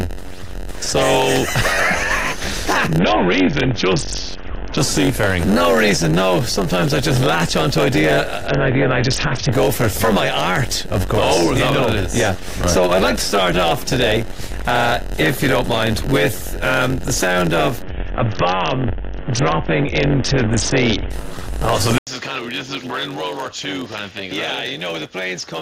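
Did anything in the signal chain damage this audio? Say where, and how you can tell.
Yes. A block size mismatch (padded) sits in the driver or buffer stage: shorter blocks are zero-filled to the reader's size, inserting a gap each block. That gives a steady buzz at 91.9 Hz throughout, and the audio runs slow at 0.919 times speed with pitch roughly unchanged.

The Bluetooth link suffered an SBC bit pool drop, from 28 down to 6, about 60 kbps, at 2.99–4.77 s, 8.47–9.53 s and 17.82–21.10 s. Starved of bits, the upper sub-bands vanish and the rest quantise coarsely, so treble dulls and gritty noise rises.

At 21.98 s the input was likely switched to a poorer device. There is an 80 ms silence, then a narrower band, a level drop of roughly 10 dB and a new noise floor around 35 dB below the signal, lasting to the end.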